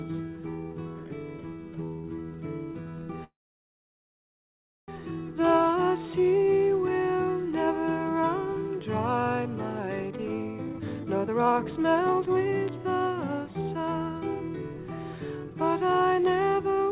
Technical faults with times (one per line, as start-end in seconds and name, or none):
3.24-4.90 call audio freeze
10.67-12.54 jitter buffer speed-up